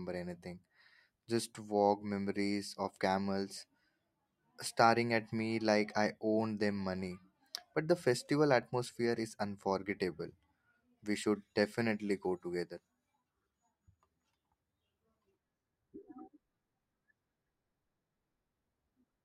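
Speech with a sudden gain jump: just after "should definitely go", at 12.63 s, voice and background noise drop together by about 4 dB, then return at 14.00 s. The waveform envelope steps down and back up abruptly, and the spectrogram shows a uniform darkening across all frequencies. This is likely a gain change applied without a ramp.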